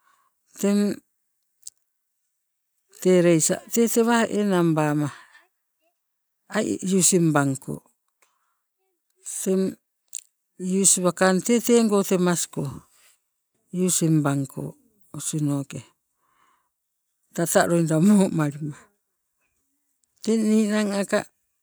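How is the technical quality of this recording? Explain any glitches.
No glitches or technical faults can be heard anywhere in the recording, so there is nothing to explain.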